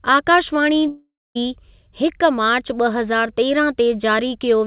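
From 0.88 to 1.37 s comes a long network dropout, likely lost packets: the sound smears into a fading buzz, goes quiet, then resumes minus a chunk.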